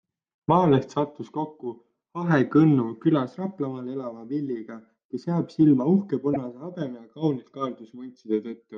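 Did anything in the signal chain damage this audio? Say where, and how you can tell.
Yes: repeated frames, at the codec or storage stage. Just after "kes jääb silma uhke", near 6.33 to 6.37 s, the same 24 ms plays twice, which fits one compressed frame being repeated. A spectrogram shows that identical slice twice in a row, adding 24 ms.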